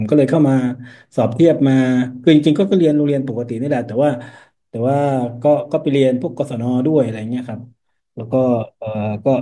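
No technical faults are audible anywhere in the speech recording.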